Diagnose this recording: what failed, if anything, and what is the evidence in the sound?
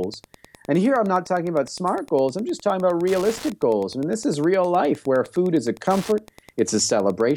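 Wi-Fi interference in the analogue wiring: a tick every 102.4 ms runs under the speech throughout, about 25 dB down, as the circuit rectifies a nearby radio's beacon.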